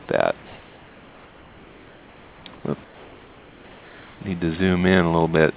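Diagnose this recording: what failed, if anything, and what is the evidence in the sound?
At the call-processing stage, comfort noise replaces the background from 0.46 to 2.46 s, 2.56 to 2.64 s and 2.84 to 4.2 s. The real background gives way to flat, featureless hiss about 2 to 3 dB quieter, likely from discontinuous transmission. Spectrograms show smooth, uniform noise, capped at 4 kHz.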